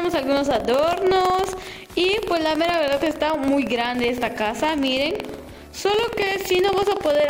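Buffer tearing runs through the whole clip: a rough, robotic rattle at 21.5 Hz, which fits a 2048-sample buffer. In each period, a small slice replays audio from about a fifth of a second earlier, leaving hard waveform joins and evenly spaced vertical streaks on a spectrogram.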